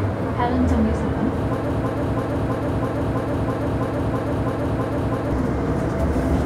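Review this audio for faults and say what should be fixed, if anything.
Broken-record loop from 1.71 to 5.33 s: a 0.33 s fragment repeats exactly, back to back, 11 times, and the sound that belonged in that span is lost. The likely cause is a stalled player, encoder or stream resending its last buffered fragment. Add stall detection that outputs silence or resynchronises rather than replaying stale buffer contents.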